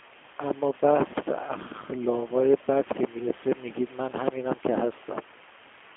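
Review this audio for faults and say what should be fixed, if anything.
The G.729 codec damage runs through the whole clip and is plainly audible. Everything is squeezed into a narrow phone band, roughly 250 Hz to 3.4 kHz, with nothing at all above 3.6 kHz. The speech has that slightly rough, synthetic edge you get when the codec rebuilds each short frame from a filter model, a pitch guess and a handful of pulses, which fits an 8 kbit/s G.729A link. The room noise, sitting about 23 dB under the speech, picks up a bit of the same treatment. To prevent it, route the call over a wideband codec such as G.722 or Opus instead of G.729.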